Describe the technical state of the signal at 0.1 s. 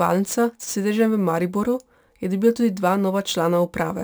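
At 0.1 s the speech carries crude rate conversion, present throughout the clip. It sounds like samples were simply repeated to reach 44.1 kHz from 32 kHz, with no filter, leaving a gritty, inharmonic fizz roughly 25 dB down.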